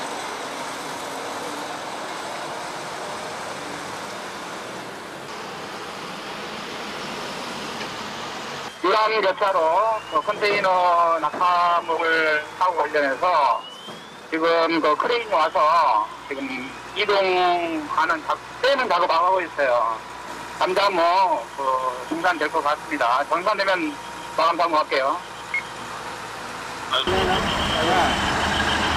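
Throughout the clip, a gain stage drives the signal about 6 dB past what the converter or number format can hold, so peaks are sliced flat: hard clipping. Only around one percent of samples hit the ceiling, giving crackle and gritty, bright distortion on the loudest moments.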